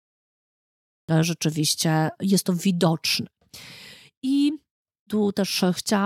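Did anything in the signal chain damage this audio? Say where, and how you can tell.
Yes. There is a cut-off start, introduced where the recording or stream was started. From 0 to 1.09 s the file holds digital silence. At 1.09 s the speech appears abruptly, already mid-sound, with the words "rzeczywiście jest to widoczne" following. There is no natural onset or fade-in. The capture began late, so the opening of the utterance was never written. What came before the cut is missing, not muted.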